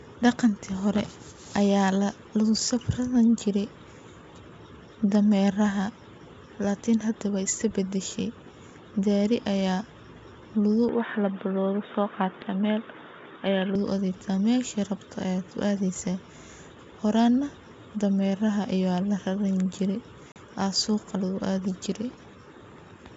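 From 10.89 to 13.75 s the speech turns dull and boxy with nothing above 3.8 kHz and a new noise floor about 35 dB down, with no gap or level jump, which marks a likely input switched to a poorer device rather than a codec change. At 20.32 to 20.37 s comes packet loss on an ADPCM call: a hard-edged 40 ms hole, about two packets, after which the mistracking G.722 decoder returns with brief distortion, unlike a plain dropout.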